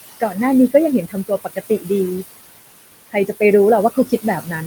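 Noise suppressor artifacts run through the whole speech clip. The room noise sits about 14 dB below the speech. The suppressor judges each frequency band, frame by frame, and pulls down whatever it takes for steady noise by about 20 dB. So the background drops away in the gaps and comes back under the speech. The noise floor keeps shifting rather than holding still.

Speech cut by the noise suppressor appears three times. From 1.08 to 1.9 s, the suppressor mistakes parts of the speech for noise. It turns them down by up to about 17 dB, over roughly a third of a second in total. Those parts sound swallowed. From 3.9 to 4.25 s, it happens again, with a drop of up to about 16 dB over a shorter stretch. From 4.41 to 4.54 s, a brief dip of about 11 dB leaves the sound faint.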